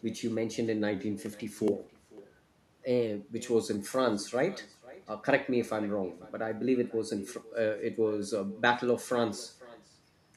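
From start to finish, the speech carries an echo with no canceller. A loudspeaker at the far end replays the call. Its microphone picks that sound up again, and nothing strips it out. So the talker's own voice returns after the network round trip. Each phrase is trailed by a faint copy about half a second later. That copy sits about 22 dB below the speech. It sounds thinner.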